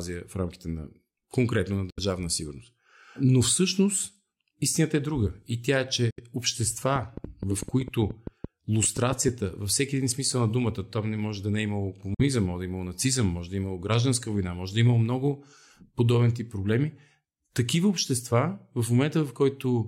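At 1.90 to 2.00 s and again at 6.10 to 6.20 s the speech drops out for about 70 ms, and at 12.14 to 12.21 s for about 46 ms. These gaps are likely a Bluetooth dropout: late packets were discarded, leaving silence, and the speech resumes further along, as if it had played on. The gap lengths fit three, then two, lost frames.

From 6.96 to 9.29 s a train of clicks runs over the speech and its pauses, around fifteen similar pops at about 6.5 per second, unevenly spaced and peaking roughly 10 dB above the speech, likely from interference or a faulty connection.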